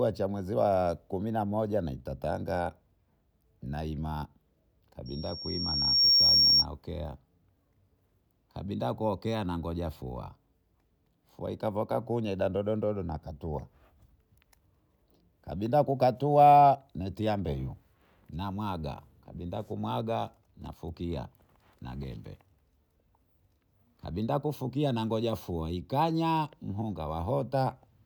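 From 5.06 to 6.66 s, loudspeaker feedback squeal: the microphone hears its own loudspeaker, and at 5.5 kHz the loop gain passes unity, so a piercing tone swells over about a second to roughly 10 dB above the speech, then stops. A spectrogram shows one bright horizontal line.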